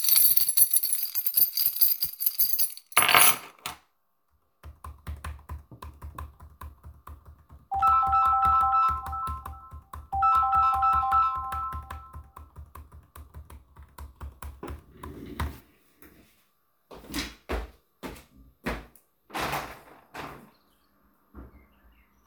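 From 0.98 to 2.62 s the sound runs 5.6% fast and nearly a semitone sharp, then snaps back. From 13.53 to 14.73 s it drops 5.6% slow and a semitone flat. That's likely a drift correction step, with clock-matching software jumping the rate to rebalance its buffer.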